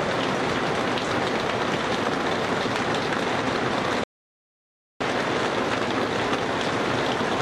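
At 4.04 s the input feed was likely lost for a moment, with the recorder writing silence in its place, producing an audio dropout to silence. The sound cuts off abruptly, leaving 0.97 s of dead silence without room tone, then resumes mid-flow at 5.00 s.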